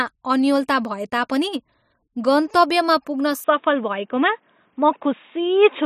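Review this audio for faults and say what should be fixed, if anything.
From 3.44 s to the end, the speech suddenly turns dull and boxy. Nothing is heard above 3.8 kHz. Faint new background noise appears, with no gap and no level jump. The input was likely switched to a poorer device. Lock the recording input to the chosen microphone so the system cannot swap devices mid-take.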